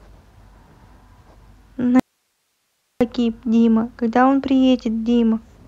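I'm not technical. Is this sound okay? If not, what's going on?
No, not quite. From about 2.00 to 3.01 seconds the speech drops out for roughly a second, leaving only a faint hiss: an audio dropout to a faint residue. It cuts off abruptly rather than pausing, likely a brief signal loss while the recording line stayed live.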